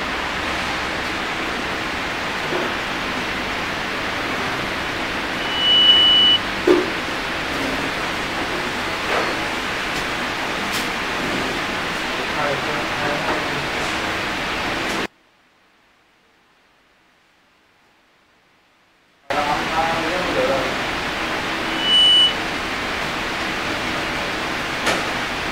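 One channel inverted, from 15.06 to 19.30 s: the audio suddenly drops by about 33 dB and stays sunken for those four seconds. The likely cause is one stereo channel flipped in polarity, so the shared content cancelled when both channels were summed to mono.

Loudspeaker feedback squeal, from 21.63 to 22.44 s: a 3 kHz tone swells up within about a third of a second and rises to roughly 10 dB above the sound. A microphone was picking up its own loudspeaker, and the loop gain exceeded one at that frequency.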